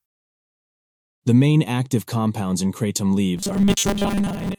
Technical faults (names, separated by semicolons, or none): robotic sound from repeated short buffers